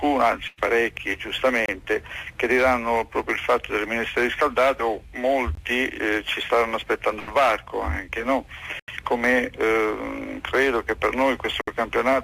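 At 0.47 to 0.59 s a burst of packet loss replaces about 100 ms of audio. The receiver stretched the last sound into a decaying buzz or hiss, and the sound then resumes further on, with the missing stretch gone. On a spectrogram the harmonics or noise run flat and fade before an abrupt jump to different content. The same happens at 7.19 to 7.29 s, this time over about 80 ms.

At 1.66 to 1.68 s comes a block of digital silence. The output buffer was likely not filled in time, so the sound cuts out with no fade, leaving a short hole. Further blocks follow at 5.55 to 5.57 s, 8.80 to 8.88 s and 11.61 to 11.68 s. The 21 ms and 85 ms blocks fit 1024- and 4096-sample buffers at 48 kHz. The waveform shows a flat line with vertical steps at both edges, and the spectrogram shows a blank column.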